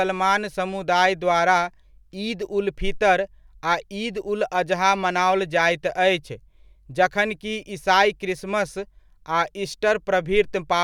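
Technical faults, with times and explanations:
No technical faults can be heard anywhere in the recording.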